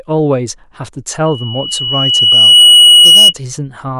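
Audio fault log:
1.25–3.34 s: loudspeaker feedback squeal. A single tone at 2.9 kHz rises out of the speech and takes about a second and a half to swell to full strength. At its peak it sits about 15 dB above the speech, then ends at 3.34 s. The microphone was catching its own loudspeaker output, and at 2.9 kHz the round trip gained more than it lost, so that one frequency kept reinforcing itself.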